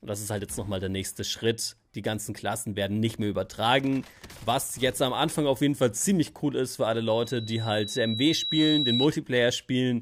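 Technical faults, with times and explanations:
7.07 to 9.09 s: loudspeaker feedback squeal. A steady tone near 3.9 kHz swells over about a second and a half. It ends around 5 dB louder than the sound. The microphone hears its own loudspeaker, and at that pitch the loop gain exceeds one.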